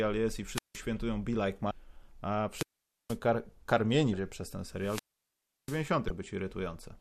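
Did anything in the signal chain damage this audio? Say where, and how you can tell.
Yes. Wireless microphone squelch dropouts hit the radio link at 0.53–0.78 s (after "jest i", muted about 0.17 s), 2.52–3.18 s (before "kar karmieni", about 0.47 s) and 4.78–5.87 s (after "przez ten", about 0.69 s). Each time the FM signal fades, hiss swells, the receiver's squelch gates the output to near silence, then speech returns.

Damaged data in the compressed stream, at the codec or storage stage, shows up as short blips at 1.71 s, 4.13 s and 6.07–6.10 s. Corrupted bytes make the decoder misread frames and lose sync, so it skips ahead to the next valid header, leaving a brief glitch.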